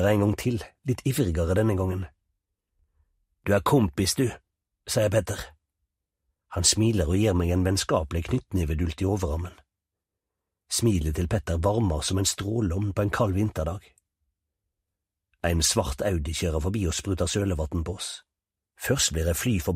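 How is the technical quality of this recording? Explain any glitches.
The recording has one audible glitch, DAB burbling, from 15.62 to 15.75 s. Weak reception let bit errors of under half a percent through into the MP2 data, corrupting sub-band samples across what sounds like about nine frames, producing short blips of noise in single sub-bands over the audio.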